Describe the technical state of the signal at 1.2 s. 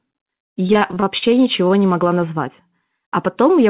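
At 1.2 s the signal sits at the tail of a stretch of repeated packet loss (robotic sound), from 0.62 to 1.24 s. Packets repeatedly went missing, in holes of up to 39 ms, and each was patched by extending the preceding sound. With about 29% of the stretch concealed, the speech comes out choppy and robotic. It passes through a call path with nothing above 4 kHz, which fits G.711.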